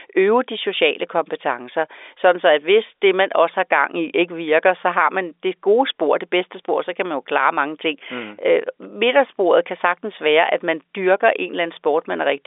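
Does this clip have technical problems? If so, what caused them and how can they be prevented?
No, nothing stood out on listening to this telephone-band speech, so there is nothing here that needs preventing.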